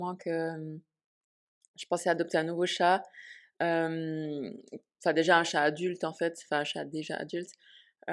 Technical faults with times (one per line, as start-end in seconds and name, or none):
none